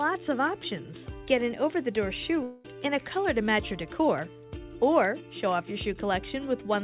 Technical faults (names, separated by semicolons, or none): long network dropout